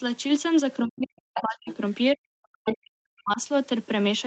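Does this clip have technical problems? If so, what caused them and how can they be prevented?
Yes. From 0.8 to 1.69 s and again from 2.15 to 3.4 s, the speech is suppressed in double talk: it sinks by roughly 40 dB, likely because an echo canceller heard both sides at once and turned everything down. Unlike a network dropout, it tracks the other talker. Better echo cancellation with a double-talk detector, or a headset, prevents it.

The other side's voice leaks through in short scraps at 1.34–1.42 s, 1.66–1.76 s and 2.67–2.74 s. The first and last are nearly as loud as the speech, and the middle one is well below it. The likely cause is loudspeaker echo left in the microphone. A second, distinct voice tells it apart from reverb. A headset or a stronger echo canceller prevents it.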